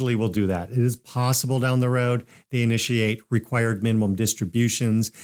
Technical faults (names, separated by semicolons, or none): none